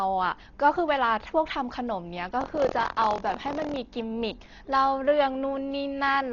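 From start to end, the audio was most likely squeezed through a Dolby Digital (AC-3 style) encoder at a very low bitrate, around 32 kbps. The encoder narrowed the band and starved many frequency lines of bits, so the decoder filled them with noise. The speech has nothing above 6.9 kHz and sounds heavily dulled, with a rough, fluttering grain clinging to the voiced sounds, which is heavy codec damage.

From 2.39 s to 3.77 s there is buffer tearing. The writing program and the playback hardware slipped against each other, so their positions cross inside every buffer period, which fits a 1024-sample buffer. A small slice of each period, about 7 percent, replays audio from roughly 50 ms earlier, with hard joins at both edges. This produces a robotic buzz at 43.1 Hz riding on the speech for that stretch.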